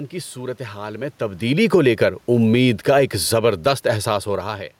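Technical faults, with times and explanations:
1.59–4.65 s, automatic gain falling: the gain control judged the input too loud or its background noise too strong and eased its gain down by about 5 dB over three seconds, so speech and room noise sink together. The waveform envelope tapers steadily and the spectrogram's noise floor darkens alongside.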